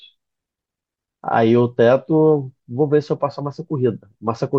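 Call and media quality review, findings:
Watery, swirly speech throughout. Treble cut off; dull top end. Metallic chirps on s sounds. Likely cause: MP3 compression, damage pointing to about 64 kbps. Starved encoder drops treble and zeroes weak frequency lines, which flicker frame to frame.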